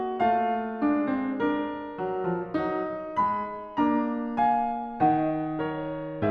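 All the way through, the music sounds dull and gurgly, with upper bands flickering out, which is likely MP2 compression at a low rate, fitting something around 80 kbps.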